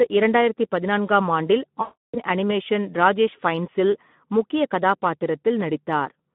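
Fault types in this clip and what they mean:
Speex codec: a CELP speech codec running at about 11 kbps over a 150 Hz to 3.5 kHz line band, starving the excitation so the speech sounds hoarse and noisy throughout. A spectrogram shows smeared harmonics, noise-filled gaps between them, and nothing above 3.5 kHz.
VoIP packet loss concealed by the speech codec: from 1.81 to 2.20 s, after "ஆம் ஆண்டில்", about 320 ms of packets vanish and the decoder stretches its last pitch and filter into a fading buzzy tone or coloured noise. The spectrogram shows frozen, decaying energy, and the waveform envelope shrinks before "அனிமேஷன் ராஜேஷ் ஃபைன்ஸ்ஸில் முக்கிய".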